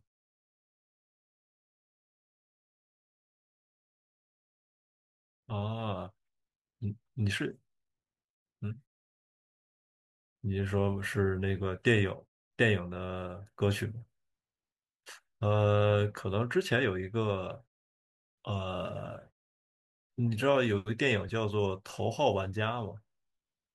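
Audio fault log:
No technical faults are audible in this speech recording, and the signal is intact over its whole duration.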